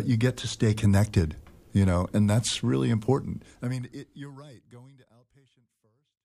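No technical faults can be heard in this audio. The level fades out smoothly from around 3 s until it ends at 6.25 s, with no click or hard edge.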